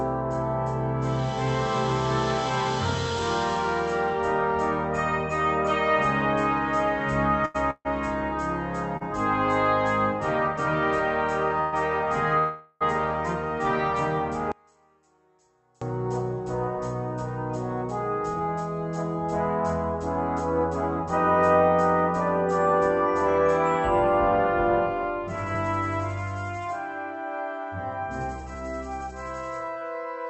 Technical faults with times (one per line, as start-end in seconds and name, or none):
7.45-9.03 repeated stalls (stutter)
11.61-11.74 call audio freeze
12.38-12.83 call audio freeze
14.52-15.82 one channel inverted
20.59-30.26 jitter buffer speed-up